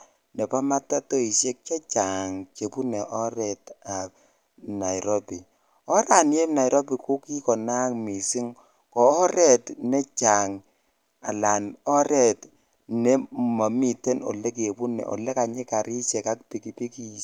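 A spoken recording with nothing technically amiss to point out anywhere along its length.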